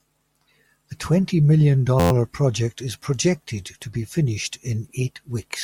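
From 2.00 to 2.11 s, after "twenty million" and before "project is projected to", a system hang loop replays one 11.61 ms chunk ten times, consistent with a 512-sample buffer. It sounds like a brief 86.1 Hz buzz, a comb of harmonic lines on a spectrogram and an identical repeating waveform.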